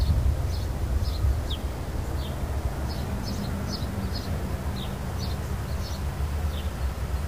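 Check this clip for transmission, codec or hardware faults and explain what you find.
There's one problem, and it runs through the whole clip: low bit depth without dither. The sound is grainy and gritty, with a rough distortion that tracks the signal and gets worse as things get quiet. Faint passages break up into a sputter or fall to silence. The likely cause is a reduction to around 6 bits with plain truncation and no dither, so the rounding error follows the audio and sits only about 20 dB below it.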